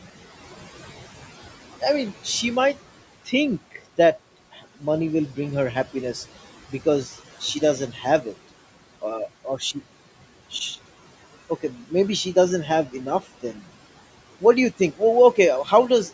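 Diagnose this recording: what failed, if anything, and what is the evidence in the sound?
Noise suppressor artifacts come from the call-processing stage. The room noise, about 17 dB below the speech, is pulled down by about 16 dB between phrases and rises again under them. A spectrogram shows the noise floor pumping with the speech, below an 8 kHz ceiling set by the call microphone path.

Speech cut by the noise suppressor occurs within 1.81–3.83, 4.52–4.83, 7.4–8.34, 9.02–9.76, 11.75–13.63 and 14.41–16.11 s. The suppressor treated soft speech as noise, so faint endings and consonants sink by about 9 to 15 dB. The waveform shows short envelope notches, and the spectrogram shows missing consonant energy.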